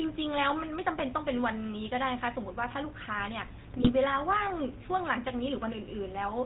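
Speech carried through the GSM full-rate codec, with a buzzy, gravelly roughness throughout and nothing above 4 kHz. That sound fits a 13 kbps full-rate stream: the vocal tract is modelled and driven by regularly spaced pulses, and the excitation is heavily decimated. GSM bit errors break in twice, a brief pop and squawk at 0.97 to 1.01 s and a longer gargling burst from 3.70 to 3.90 s. Corrupted filter, pitch or gain values warp the spectrum and jolt the level for each damaged frame.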